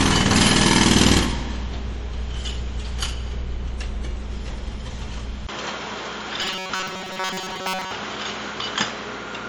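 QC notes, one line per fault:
Throughout: MP3 compression. The codec damage is plainly audible: a watery, swirling texture as weak frequency components drop in and out between frames, with smeared transients and a metallic edge on bright content. This much swirl is the signature of a starved encoder, likely MP3 at a low bitrate, consistent with something around 48 kbps.
5.47 s to end: input switched to a poorer device. A brief gap of about 20 ms marks the change. After it the bandwidth narrows, so the sound turns duller and boxier. The level shifts by roughly 5 dB, and a new noise floor appears, around 40 dB under the signal. The sudden, lasting change in tone, level and background points to the capture likely moving to a different, lower-grade microphone or headset path.
6.42 to 7.91 s: robotic sound from repeated short buffers. Within the degraded section the sound takes on a rigid metallic buzz pitched at 188 Hz that only loosely tracks the underlying audio. 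Most of this stretch is replayed material rather than new signal, so the real audio is being skipped. A forced pitch of 188 Hz matches a loop period of about 5.3 ms, which fits playback likely repeating a short buffer while it waits for fresh data.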